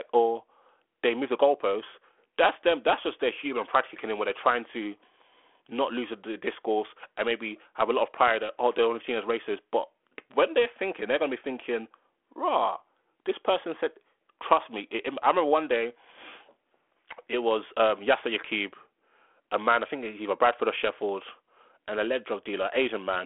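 No technical faults can be heard in this speech.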